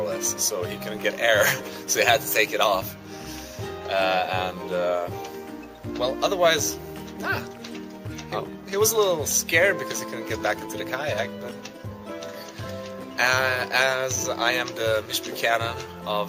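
No technical faults are audible anywhere in this audio.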